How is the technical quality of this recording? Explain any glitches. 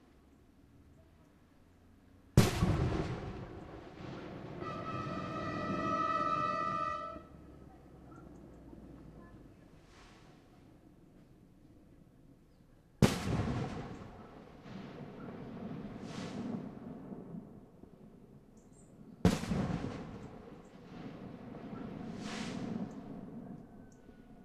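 Four short skips from overlap between stream segments, at 2.74, 6.72, 10.71 and 22.70 s, spaced in multiples of a roughly 4 s segment. Overlapping timestamps trim real sound, so the waveform jumps abruptly, showing a thin vertical spectrogram line, heard as a tiny skip.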